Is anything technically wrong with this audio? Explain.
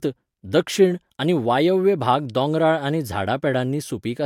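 No, nothing technically wrong can be heard in this speech recording. There is nothing in it that needs pointing out or fixing.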